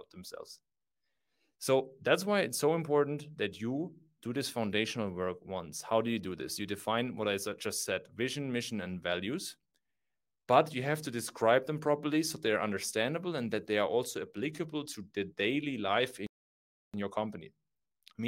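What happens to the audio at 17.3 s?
At 17.3 s the speech is in a time-compressed catch-up, running from 16.94 s to 18.28 s. After a stall, the player drains its backlog by dropping short segments and cross-fading the joins, so the audio plays about 1.25 times faster while keeping its normal pitch.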